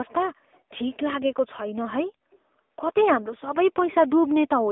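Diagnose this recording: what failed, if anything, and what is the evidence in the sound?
Codec stage: the AMR narrowband mobile codec leaves the speech buzzy and synthetic throughout, fitting a low bit-rate mode near 7.95 kbps. On a spectrogram, energy sits between about 250 Hz and 3.6 kHz, with a hard ceiling at 3.8 kHz.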